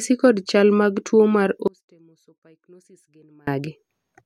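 At 1.68 s the speech cuts off abruptly and stays gone until 3.47 s, about 1.8 s in all. The gap is not silent: a faint sound lingers, roughly 30 dB below the normal signal level. This is an audio dropout to a faint residue. The likely cause is that the wanted signal was lost upstream while the path after the break stayed live, so only that weak residue came through before full level snapped back.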